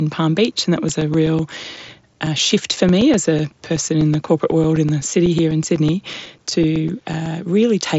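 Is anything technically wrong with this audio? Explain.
Yes. From 0.51 s to 7.26 s, periodic USB or driver dropouts blank roughly 4 ms of the speech to silence every 0.125 s. A background task is blocking the audio path at a fixed interval, which produces a steady train of ticks. The speech itself arrives through an mSBC Bluetooth headset link, band-limited to about 7.7 kHz.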